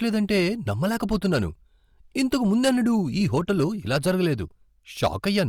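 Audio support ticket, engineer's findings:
Hard clipping throughout the speech. Peaks driven about 6 dB past full scale, tops flattened. Only a small fraction of samples, under one percent, hit the ceiling, so it is heard as crackle on loud syllables, not continuous fuzz. Flat tops add high harmonics. Probable component: input gain set too hot ahead of the converter or a fixed-point stage. Reduce gain upstream.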